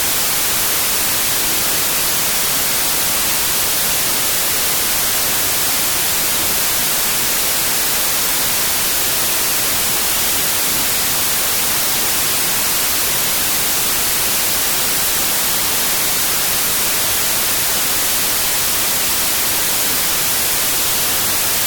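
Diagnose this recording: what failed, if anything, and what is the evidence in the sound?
Wrong sample width at sample-format conversion: 32-bit integer data read as 16-bit splits each sample in two, burying half-speed, octave-low speech under loud noise throughout.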